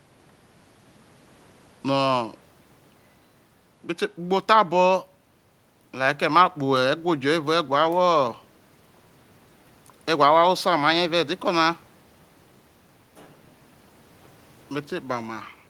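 Nothing stood out on listening, with only a faint room noise sitting about 36 dB below the speech.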